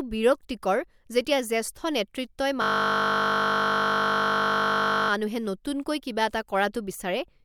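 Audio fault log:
2.62 to 5.10 s, system hang loop: The system froze while the hardware kept replaying one 20 ms stretch of its buffer, 124 times. This short loop repeating 50 times a second sounds like a steady 50 Hz buzz. Little or no audio is lost.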